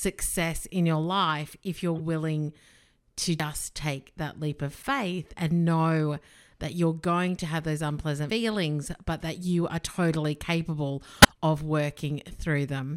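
A speech clip with two kinds of fault. Corrupt frames decoded produce short chirps and noise bursts at 1.98–2.00 s, just after "your life if you're", at 3.55–3.61 s, at 4.79–4.86 s between "take that leap of" and "and know that you're", and at 11.16–11.37 s. Damaged compressed frames were played anyway, so misread data put energy at wrong frequencies. The first three bursts each span a few frames. The last is longer, around seven frames. The sound also skips at 3.40 s and 8.30 s, the second just after "going to have those". Each jump removes about a tenth of a second and splices the edges together with no gap. The two skips are 4.9 seconds apart. This is likely audio missing between chunks, lost as a recorder working in 5-second blocks closed one block and opened the next.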